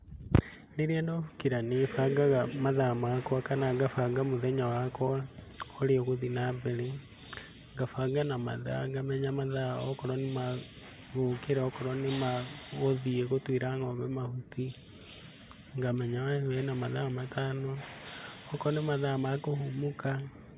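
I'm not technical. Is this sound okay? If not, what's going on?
Yes, this sound is okay; there's nothing wrong with it that needs explaining.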